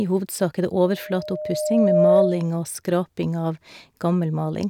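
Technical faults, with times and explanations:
0.82 to 2.49 s, loudspeaker feedback squeal: a 610 Hz tone swells over about a second and a half until it sits around 10 dB above the speech. The mic is hearing its own speaker, and at that frequency the loop gain tops one, so it keeps feeding itself.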